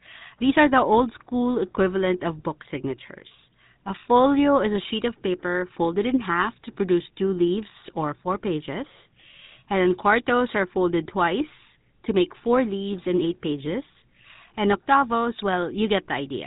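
Throughout the speech, the signal has passed through the GSM full-rate codec, which rebuilds the voice from a vocal-tract model excited by sparse, evenly spaced pulses at a rate fitting 13 kbps. The damage is plainly audible: a buzzy, gravelly roughness, with nothing above 3.8 kHz.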